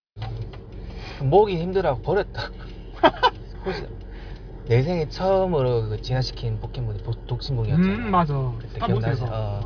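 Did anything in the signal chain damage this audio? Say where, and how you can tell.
No, nothing in the signal chain damaged this audio.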